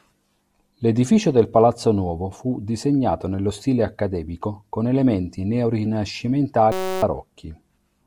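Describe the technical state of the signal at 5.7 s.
At 5.7 s the speech signal is intact, with no dropout, distortion or other audible fault at that moment.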